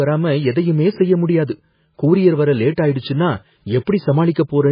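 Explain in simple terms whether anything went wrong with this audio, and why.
Yes, the whole recording has that watery, swirly quality, and nothing comes through above about 5 kHz, so s sounds go dull and fizzy. That's most likely heavy MP3 compression, where the encoder ran short of bits, chopped off the treble and let quieter detail flicker in and out.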